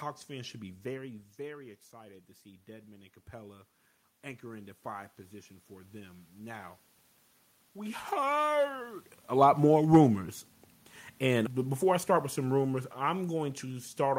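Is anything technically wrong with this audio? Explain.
Yes. Automatic gain rising occurs from 1.36 to 6.84 s, gain climbing about 8 dB after the input fell about 12 dB, and again from 7.74 to 9.08 s, about 3 dB. Voice and room noise swell together, unlike the talker moving, which changes only the voice.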